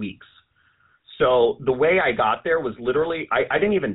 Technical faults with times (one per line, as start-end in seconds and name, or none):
0.00-3.94 GSM full-rate codec